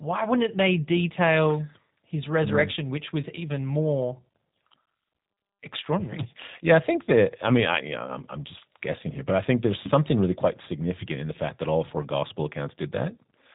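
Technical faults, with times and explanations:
Throughout, G.729 codec: speech rebuilt from filter, pitch and pulse parameters at 8 kbit/s, so sounds rough and synthetic; spectrogram shows nothing above 3.8 kHz.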